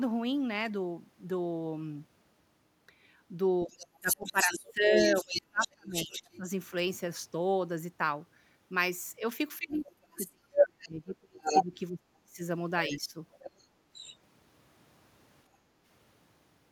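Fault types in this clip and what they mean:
speech suppressed in double talk: The talker's voice gets pushed way down in two stretches, 3.65 to 6.47 s and 9.58 to 13.15 s, with the worst dips around 30 dB and 35 dB. About two seconds of the first stretch and three of the second are affected. It lines up with the far end talking at the same time, so the likely cause is an echo canceller that couldn't tell local speech from loudspeaker echo and clamped down on both.
other side's voice leaking through: A second voice comes through the mic alongside the talker, likely far-end audio from the loudspeaker that the echo canceller didn't fully remove. It's there from 3.72 to 6.37 s at about 5 dB below the talker, and at 10.16 to 10.87 s around 10 dB under. At 11.43 to 11.65 s it briefly comes through about 5 dB louder than the talker. A fainter tail runs from 12.87 to 14.16 s at about 15 dB down.
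background gated by the echo canceller: Near the end, from 15.58 to 15.85 s, the room tone sags by about 7 dB for roughly a third of a second, then comes straight back. That's the echo canceller ducking the microphone while the loudspeaker was active, taking the ambient noise floor down with it and releasing once playback stopped. It's a short hole in the background rather than in the speech itself.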